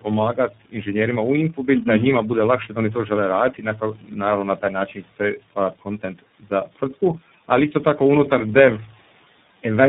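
Speech that sounds rough, muffled and warbly throughout, with nothing above 3.8 kHz. This is tandem speech coding: the sound fits a call passed through about three lossy speech coders in a row, such as GSM full rate and iLBC, each re-encoding the previous one's already degraded output. Between 4.57 and 5.20 s, parts of the speech turn faint and swallowed, dropping by about 11 dB over roughly a fifth of a second in total. This is speech cut by the noise suppressor, which mistook those quieter speech portions for the room noise sitting about 25 dB below the speech and turned them down with it.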